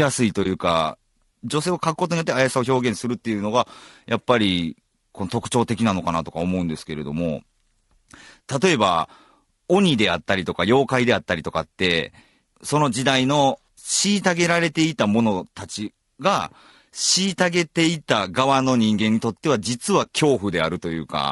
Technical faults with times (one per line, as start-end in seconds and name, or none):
0.00-21.31 low-delay AAC compression
0.43-0.46 AAC frame loss with muting
20.03-20.07 AAC frame loss with muting